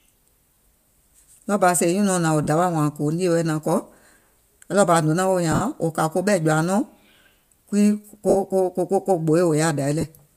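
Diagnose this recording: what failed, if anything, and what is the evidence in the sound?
Lost LE Audio frames on the Bluetooth link at 0.54–0.56, 2.44–2.48, 5.52–5.62, 8.29–8.36 and 10.01–10.04 s: the concealment produces a noisy smear, not hard silence.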